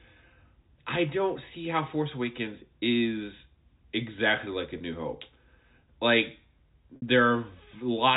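Speech over a telephone link where packets dropped out and the receiver filled each gap by repeating the last pitch period: brief held, buzzy moments at 2.81 s and 4.78–4.80 s (about 20 ms each), and a longer 60 ms gap at 6.96–7.02 s that fades toward silence before the speech cross-fades back. The G.711 A-law narrowband sound, cut off above 4 kHz, is the format itself.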